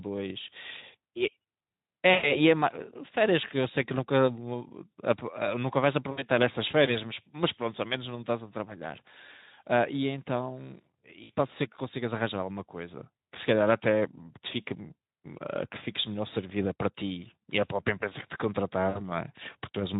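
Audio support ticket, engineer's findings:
VoIP packet loss concealed by the speech codec at 2.13–2.31 s, 6.11–6.24 s, 11.23–11.31 s and 18.89–19.0 s. The first hole is about 100 ms, the rest about 60 ms. The decoder stretches the last pitch into a fading buzz or coloured noise, and speech stays thin briefly after each. Light Speex texture underneath.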